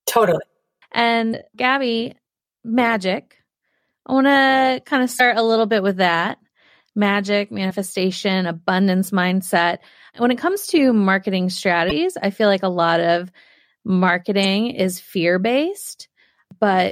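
Damaged data in the compressed stream throws the decoder off its frames, giving brief garbled blips at 1.29–1.34, 5.16–5.20, 7.67–7.71, 11.87–11.92 and 14.41–14.45 s.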